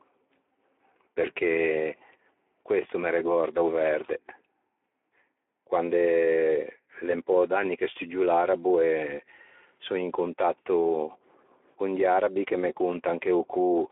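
Throughout, the speech carries Speex codec damage. It is plainly audible. Too few bits describe the excitation, so it sounds hoarse and noisy. That fits a low setting near 11 kbps. The band runs about 300 Hz to 3.4 kHz, with nothing above 3.7 kHz.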